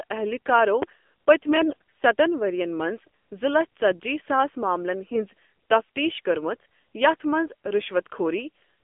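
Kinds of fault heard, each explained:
AMR narrowband mobile codec: The whole clip carries the sound of a 2G or 3G phone call. This codec runs at 8 kHz and rebuilds the voice from a vocal tract model fed by a few pulses per 5 ms subframe. Here the speech sits in a narrow band, from about 250 Hz to 3.5 kHz, with nothing bright above. The damage is plainly audible: the voice sounds buzzy and synthetic, which points to a low mode, around 7.4 kbps.
Loud pop: At 0.82 s a single sharp pop lands on top of the speech, and the voice continues underneath it. It is short, under 30 ms, and stands well clear of the signal, peaking roughly 15 dB above it. The cause is likely a sudden voltage step or pulse, for example from a plug, a switch, static discharge or a driver glitch. The circuits that follow shape that pulse into the sharp pop heard here.
AMR bit errors: From 1.49 to 1.73 s the voice turns hoarse, scratchy and gargly while keeping roughly its pitch and loudness. 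This happens when the less protected bits in codec frames flip on a weak link but the check on the key bits still passes. The excitation pulses then land in the wrong places, and the fine pitch, gain and spectral values drift. Around sixteen 20 ms frames were hit, with a few percent of bits wrong.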